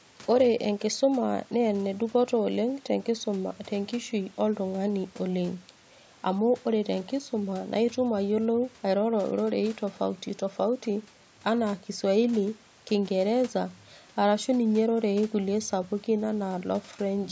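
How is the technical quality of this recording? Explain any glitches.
Nothing stood out on listening: the speech comes through call microphone processing with its top near 8 kHz and light room noise sitting about 31 dB below the voice, and no glitches were heard.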